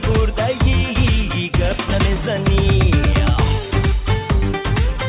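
No faults detected; the sound carries the expected narrowband call-path character, with nothing above 4 kHz.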